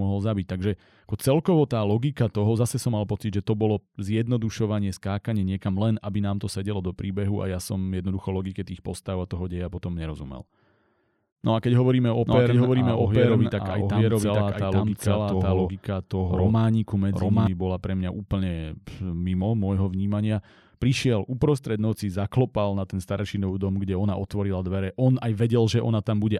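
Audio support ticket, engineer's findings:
Doubled audio track, 12.25–17.47 s, from "a keď hovoríme o" to "bola pre mňa úplne". Likely a second, slower capture path or misaligned edit copy. Full-band duplicate roughly 0.7 s behind, about equal level, dry, with abrupt start and stop.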